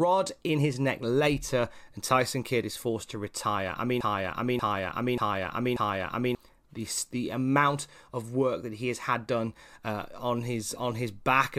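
Just after "to retire I mean", at 4.01 s, a 0.59 s fragment repeats four times back to back until 6.35 s, where "the the amount of" picks up. This broken-record loop likely means a stalled stream resent its last fragment, dropping the audio in between.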